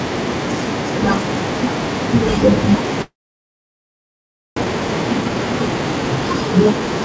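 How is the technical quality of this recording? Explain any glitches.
The recording has two linked faults: a long gap in the middle and a stretch of hurried playback straight after it. The audio is band-limited to 8 kHz, which fits a G.722 call path.

From 3.02 to 4.62 s there is a long network dropout, likely caused by packets failing to arrive. The receiver briefly extends the last sound as a fading buzz, then holds near-silence for almost 1.5 s. About 1.1 s of speech is lost entirely before audio resumes.

From 4.64 to 6.87 s a jitter buffer speed-up follows. Delayed packets arrived together, leaving roughly 0.4 s of excess delay. The receiver trimmed short pitch-period pieces repeatedly, so speech runs at 118% speed with unchanged pitch and sounds rushed.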